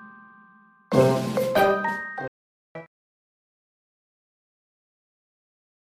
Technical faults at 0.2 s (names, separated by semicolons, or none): none